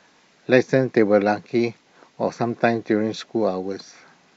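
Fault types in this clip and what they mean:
No fault types can be heard in this speech clip. There is nothing to list under any heading.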